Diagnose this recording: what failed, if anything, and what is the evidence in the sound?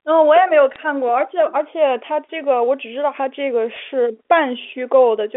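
Bit errors on the digital phone line, at the network stage: brief crackle at 0.72–0.76 s and 3.71–3.76 s, where flipped bits corrupt individual G.711 samples into sharp ticks.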